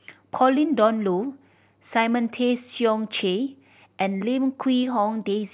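Nothing in this speech recording stands out as a technical problem; it just rolls along without a hitch from the first moment to the last.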